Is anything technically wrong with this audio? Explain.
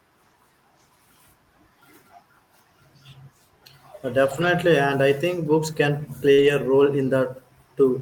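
Yes. From 4.25 to 4.47 s, and again from 6.38 to 6.48 s, the speech turns rough and grainy but never drops out. This is a lost packet rebuilt from error correction: the packets were lost, and the decoder played low-bitrate copies carried in the following packets, covering 120 ms and then 60 ms.

Just before that, from 6.33 to 6.40 s, there is a brief smear in the speech. This is short concealed packet loss: about 40 ms of the call arrived too late, and the receiver extended the preceding sound to fill the gap before blending back into the real audio.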